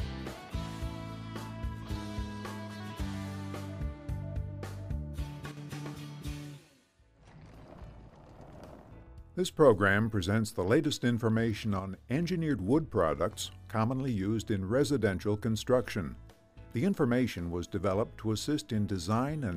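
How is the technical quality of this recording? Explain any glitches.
There are two short dips in level. At 5.51 to 5.57 s and again at 11.80 to 12.11 s, the audio abruptly drops by about 6 dB, then snaps back. That's likely one channel dropping out: with identical content on both sides, the mono sum loses half its level.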